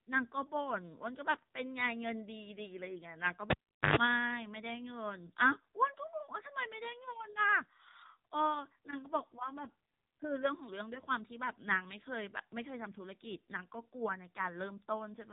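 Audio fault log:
throughout: AMR narrowband mobile codec. The speech is band-limited with nothing above 3.8 kHz, and the voice sounds plainly buzzy and synthetic, which fits a low AMR-NB mode near 8 kbps, where few pulses drive the vocal-tract model in each subframe.
3.50–3.96 s: cable pulled and plugged in. A pop marks the disconnection, followed by roughly 0.41 s of near silence. A 0.11 s burst of 50 Hz mains buzz follows as the plug's tip touches first, then a second pop as the signal returns.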